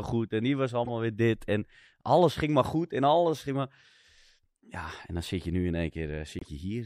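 Damaged compressed frames were played anyway: a corrupt frame decoded from 0.85 to 0.90 s, between "goed en die was" and "weer dit", then from 6.39 to 6.50 s, leaving brief chirpy noise bursts.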